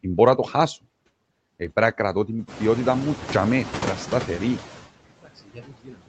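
Speech passed through a call chain shows noise suppressor artifacts throughout. Background noise is pulled down by about 20 dB between phrases and swells back under the voice. This pumping tracks the talker, unlike the room noise itself, which steps up around 2.5 s. From 5.21 s to the end at 6.09 s, just after "να σταθερή", comes speech cut by the noise suppressor. The speech is turned down by as much as about 22 dB, so it sounds swallowed and faint rather than breaking off abruptly as a packet dropout would. The audio also contains nothing above 8 kHz, which fits a wideband call codec.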